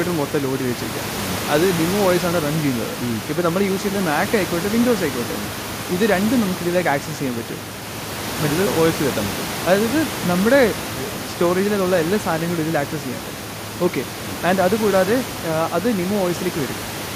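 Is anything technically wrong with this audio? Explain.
No, nothing technical goes wrong in this speech recording. The room's background noise can be heard about 10 dB below the speech, and that comes from the space around the microphone, not from the system.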